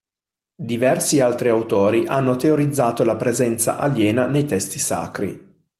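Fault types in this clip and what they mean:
No fault types are present in this clip.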